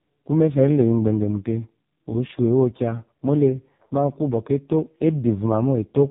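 AMR narrowband mobile codec damage runs through the whole of this speech clip, from start to finish. Nothing above 3.8 kHz survives, so the sound is narrow and boxy. The coder rebuilds the voice from a vocal-tract model fed by a few pulses per short sub-frame, and here the coding damage is heavy, giving a buzzy, synthetic quality that fits the lowest AMR-NB mode, about 4.75 kbps.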